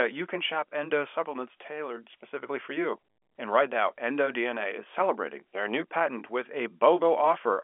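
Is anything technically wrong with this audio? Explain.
No, nothing technically wrong can be heard in this speech. It comes through as G.711 telephone coding, so the sound is confined to the narrow telephone band, with nothing above about 3.7 kHz.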